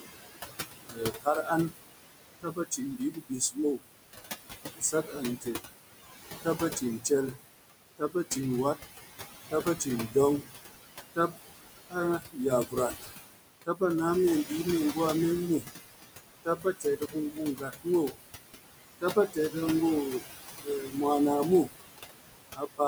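Speech runs through noise suppressor artifacts for the whole clip. The suppressor pulls steady room noise down by about 19 dB in the gaps and lets it swell back under each phrase. A spectrogram shows patchy, flickering noise bands that blink on with the voice. The room noise, which sits only about 8 dB below the speech, is what the suppressor is working against. Speech cut by the noise suppressor also occurs across nearly the full span, 0.0 to 22.8 s, adding up to roughly five seconds in all. Soft consonants and word tails are treated as noise and drop by as much as about 21 dB, so they sound swallowed. The waveform shows clipped-short decays, and the spectrogram shows missing high-frequency fricative energy.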